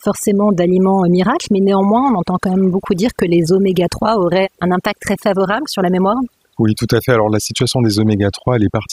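Overdone noise removal runs through the whole speech clip. Bands near the noise estimate are pulled far down, taking quiet speech detail with them, so pauses sink to near silence with twinkling specks. A spectrogram shows blank gaps dotted with isolated musical-noise blips.

A Bluetooth SBC bit pool drop follows "d'aliments euh miracles mais" at 2.03 s and lasts until 2.99 s, before "que les oméga". It returns from 7.35 to 8.69 s. Treble dulls and gritty noise rises, which fits a bit pool falling from 28 to 14, around 108 kbps. On a spectrogram the top bands vanish and quantisation grain fills the rest.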